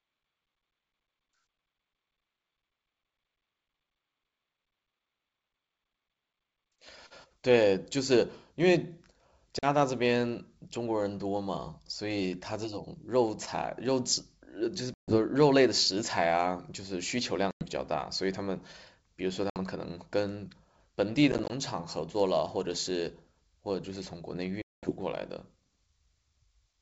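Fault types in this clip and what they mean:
Packet loss on an ADPCM call: the G.722 wideband speech cuts into abrupt silent holes lasting 40 to 210 ms, one broken into several short gaps. Unlike smoothly concealed loss, each return comes back slightly distorted while the decoder's predictor catches up.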